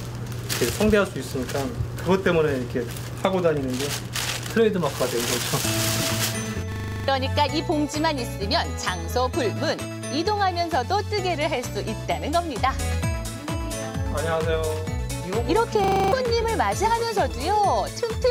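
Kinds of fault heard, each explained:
System hang loop: the machine briefly froze while the audio hardware kept replaying one 40 ms buffer, so at 6.72 s and 15.84 s you hear a 25 Hz machine-gun rattle, nine then seven repeats, with a few tenths of a second of sound lost each time.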